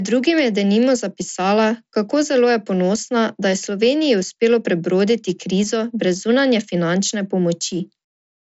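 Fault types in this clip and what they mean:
Nothing's wrong in this one: it's speech carried over a Bluetooth mSBC headset link, so the sound tops out around 7.7 kHz, as you'd expect from that wideband path.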